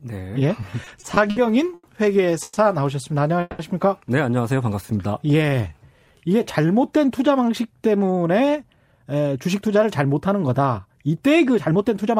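From 0.61 to 1.38 s the speech shows repeated stalls (stutter): six times the jitter buffer ran dry because packets came in late, and the receiver held the last sound, about 150 ms in total with the longest gap 60 ms. Nothing is lost, but the phrase drags and jerks.

At 1.74 to 1.85 s a short stall from a late packet follows. One packet missed its playout time, so the receiver extended the preceding sound by 90 ms and then resumed exactly where it stopped, leaving one sound audibly held too long.

Two call audio freezes occur at 2.43 to 2.58 s and 3.41 to 3.61 s. The speech halts, the last sound carries on as a fading buzz with a brief moment of silence, then resumes without loss. This was likely packets held up in transit, adding about 130 ms and 180 ms of delay.

From 4.81 to 6.67 s a jitter buffer slow-down stretches the speech to 85% speed. The receiver rebuilt its reserve by repeating single pitch periods and pause fragments, inserting about 279 ms in total, so syllables sound drawn out while pitch stays unchanged.

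From 8.16 s to 12.16 s, a jitter buffer speed-up runs the speech at 111% speed. Having accumulated surplus audio, the receiver trimmed short pitch-period pieces repeatedly, roughly half a second altogether, so delivery sounds hurried at the same pitch.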